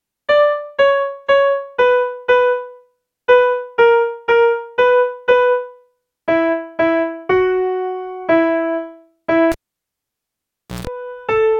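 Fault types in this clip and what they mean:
Cable pulled and plugged in: from 9.52 to 10.87 s a live lead is yanked and reinserted, giving a pop, about 1.3 s of near silence, then roughly 0.15 s of 60 Hz mains buzz while only the plug tip makes contact, and a second pop as the sound returns.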